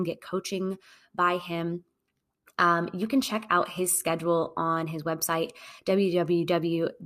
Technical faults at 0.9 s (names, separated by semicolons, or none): none